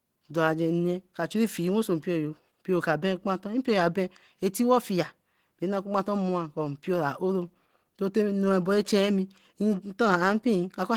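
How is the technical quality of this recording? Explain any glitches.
The quality's held back by Opus compression running the whole way through. The damage is plainly audible: speech comes across hoarse and grainy, which is likely a low-bitrate encode around 16 kbps in Opus's hybrid speech mode, filling thin bands with noise rather than leaving gaps.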